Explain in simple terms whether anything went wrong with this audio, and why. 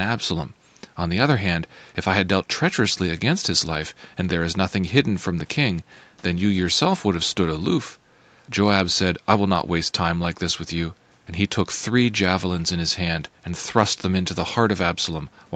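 Nothing went wrong here: the speech sounds the way a normal internet call does, with the call's microphone processing trimming away the deepest bass and the Opus call codec carrying everything up to 8 kHz, which is simply how this kind of call line handles sound rather than a fault.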